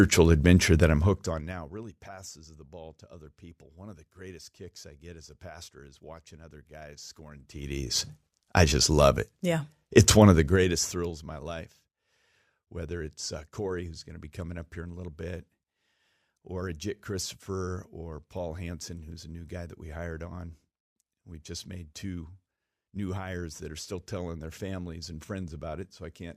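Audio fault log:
0.81–1.88 s, 7.30–7.98 s and 10.28–11.20 s, zipper noise: a fine ticking rides on the speech while the level falls before "passes the ball to", rises between "is watching other guys" and "I just love it", and falls again before "of my life". Each move of roughly 20 to 25 dB is made in unsmoothed 2 dB jumps, around fifteen or thirty a second, and every jump clicks.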